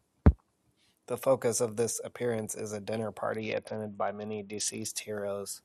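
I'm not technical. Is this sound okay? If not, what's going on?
No. Right after "appearance is a dinner", from 3.37 to 4.85 seconds, the speech turns dull and gritty. This is a Bluetooth SBC bit pool drop: a crowded wireless link briefly forced lower quality. Unlike a dropout, the sound never stops, and unlike simple muffling, it carries a sandy roughness.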